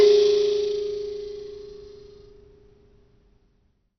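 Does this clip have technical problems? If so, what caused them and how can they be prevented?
Yes. Throughout, the music is dull with nothing above 6.2 kHz and a gurgling, granular grit, likely heavy MP2 compression at a rate near 48 kbps. Unlike a plain low-pass, the upper bands flicker. Prevent it by encoding at a higher bitrate.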